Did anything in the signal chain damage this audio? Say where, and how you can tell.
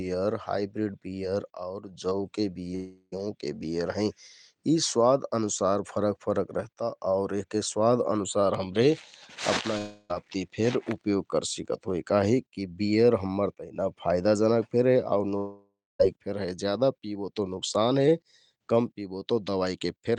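Yes. At 2.75–3.14 s, 9.78–10.11 s and 15.37–16.01 s the speech breaks off and its last sound is stretched into a fading buzz for about 0.36 s, 0.32 s and 0.62 s. In the third, the fill dies into roughly 0.23 s of silence. Speech resumes with the lost stretch simply gone. The stage is the network, likely a long network dropout concealed by the receiver. A spectrogram shows smeared, fading horizontal bands instead of speech structure, and the waveform shows a shrinking, repetitive envelope.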